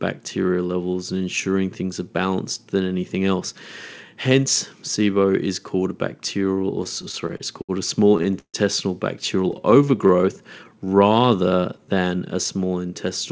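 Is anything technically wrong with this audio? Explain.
Yes. There are two faults, and they overlap near the end.

Repeated stalls (stutter) occur from 6.84 to 7.71 s, just after "bacterial or", then from 8.09 to 8.56 s, and from 9.52 to 10.25 s. Packets arrived late, so the jitter buffer kept running dry. The receiver stretched the last sound to bridge each wait. Nothing is lost, but the audio drags and hitches. The worst gap is about 150 ms, at around 8.1 to 8.6 s.

A jitter buffer slow-down runs from 9.60 to 12.00 s, ending just before "a small". The buffer was short of reserve and refilled it by repeating single pitch periods. This adds about 270 ms, so playback runs at 89% speed with unchanged pitch. The speech sounds drawn out.

The audio has no content above 8 kHz, which is consistent with a wideband call codec such as G.722.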